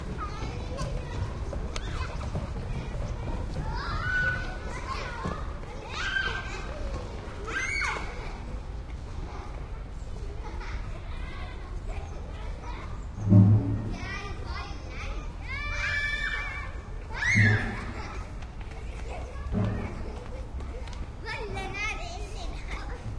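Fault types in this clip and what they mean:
No technical faults can be heard in this recording.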